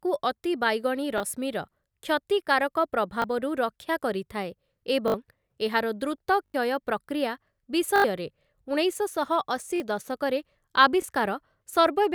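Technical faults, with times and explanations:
1.18–1.20, 3.22–3.24, 5.08–5.14, 6.46–6.54, 7.96–8.04, 9.76–9.80 and 11.02–11.04 s: repeated buffer. Playback ran out of fresh audio, so the device replayed its last block of speech. The repeated segment sounds like about 20 ms, consistent with a 20 ms buffer. It repeats once at 1.18, 3.22 and 11.02 s, twice at 9.76 s, three times at 5.08 s and four times at 6.46 and 7.96 s. Each hard join produces a click or a brief buzzy stutter, and up to about 70 ms of the original speech is lost at each event.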